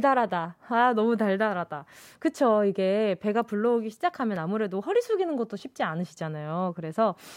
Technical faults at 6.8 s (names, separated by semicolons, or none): none